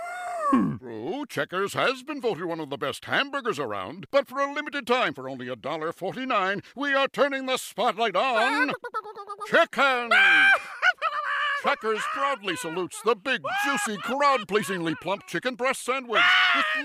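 Nothing in the audio stood out as a technical problem on listening.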